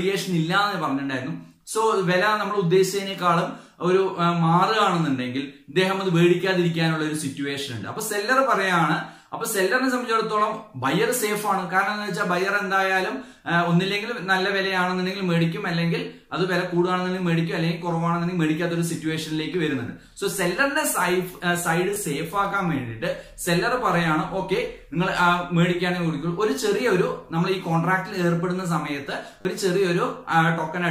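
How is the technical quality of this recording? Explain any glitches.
Two short glitches mar the recording. Repeated buffer at 21.94–21.96 s and 29.41–29.45 s: late audio made the device replay its last chunk, fitting a 10 ms buffer, two then four extra times, heard as a brief buzzing stutter.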